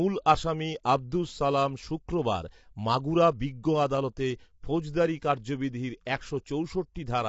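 Throughout, the speech sounds rough and grainy, with hiss between harmonics and nothing above 7.7 kHz, likely low-delay AAC compression at a bitrate near 24 kbps.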